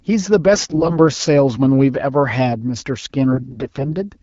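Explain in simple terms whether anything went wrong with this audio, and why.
AMR bit errors hit at 0.53 to 0.99 s and again at 3.31 to 3.94 s. Over a weak phone link, some of the less protected bits in the coded speech arrived flipped, but the check on the key bits still passed, so the damaged data was played anyway. The voice keeps its rough pitch and loudness but turns hoarse and gargly, worst in the first stretch where errors were heavier. The HD Voice codec carrying the call adds only light damage of its own.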